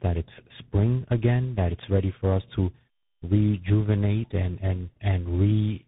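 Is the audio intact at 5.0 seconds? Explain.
No. At 5.0 seconds, as throughout the clip, the speech carries tandem speech coding. It sounds like it passed through three speech coders in a row, likely a GSM full-rate stage followed by two CVSD stages. Each was decoded and re-encoded at a link border, so every coder worked on the previous one's already damaged output. The errors compound into rough, muffled, warbly speech with nothing above about 3.8 kHz.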